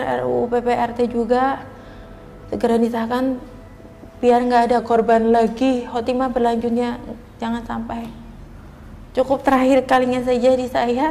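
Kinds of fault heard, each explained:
Drift correction step: from 4.79 to 6.05 s the sound slows 5.7% and sits 102 cents flat, then snaps back; likely a clock-matching rate change.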